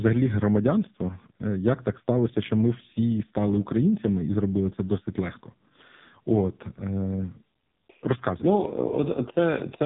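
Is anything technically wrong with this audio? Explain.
Yes. AMR narrowband mobile codec damage runs throughout. The speech has passed through AMR-NB, which samples at 8 kHz and rebuilds each 20 ms frame from a vocal-tract filter excited by a handful of pulses. Nothing above about 3.8 kHz survives, so the sound is thin and muffled. The damage is heavy, with a buzzy, synthetic, robotic edge that points to one of the codec's lowest modes, around 5 kbps, where too few pulses remain to carry natural detail.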